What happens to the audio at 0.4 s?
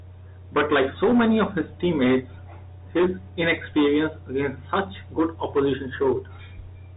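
Nothing goes wrong at 0.4 s: the speech there passes intact through ordinary G.711 telephone coding, heard as the usual telephone band with nothing above about 3.8 kHz.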